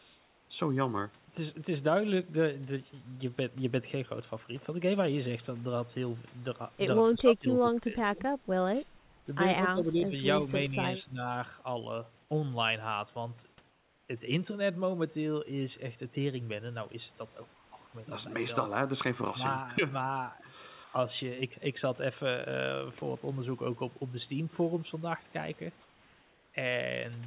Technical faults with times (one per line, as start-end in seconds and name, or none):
0.00-0.50 comfort noise in place of the background
7.12-8.20 speech suppressed in double talk
8.62-8.86 speech suppressed in double talk
8.99-9.26 comfort noise in place of the background
9.73-10.14 speech suppressed in double talk
11.06-11.18 speech suppressed in double talk
13.70-14.09 comfort noise in place of the background
17.54-17.72 comfort noise in place of the background
20.84-20.93 comfort noise in place of the background
25.82-26.54 comfort noise in place of the background